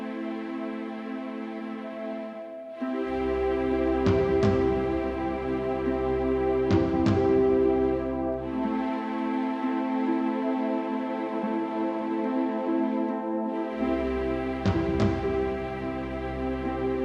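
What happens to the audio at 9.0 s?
Nothing goes wrong at 9.0 s; the audio plays through that moment intact, with no dropout, glitch or other fault.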